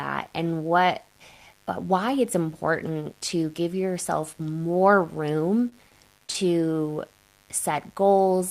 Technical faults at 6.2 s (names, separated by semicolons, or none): mains buzz; repeated packet loss (robotic sound)